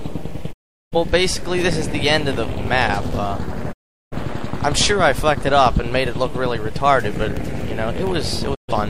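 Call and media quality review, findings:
Digital broadcast dropout at 0.51–0.96 s, 3.71–4.16 s, 8.54–8.73 s. Receiver mutes with about 20 ms fades after lost or checksum-failed frames; audio resumes later, so the content in between is gone. Gaps consistent with roughly nine, nine and three frames.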